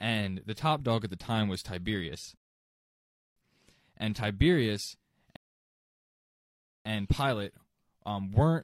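Rebuffering stalls at 2.37 s and 5.36 s: the player runs dry, and the speech halts into silence for 0.99 s, then 1.49 s, before resuming exactly where it stopped.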